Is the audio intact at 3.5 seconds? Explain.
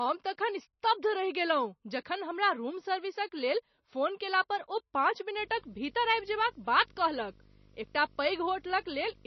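No. At 3.5 seconds, as across the whole clip, the speech sounds watery and swirly, with a metallic chirp on s sounds, smeared consonant onsets, and nothing above 6 kHz. This is likely heavy MP3 compression, at a rate that fits roughly 26 kbps. Short of bits, the encoder cuts off all treble at a fixed point and discards quieter frequency detail, which flickers in and out between frames to produce that swirling texture.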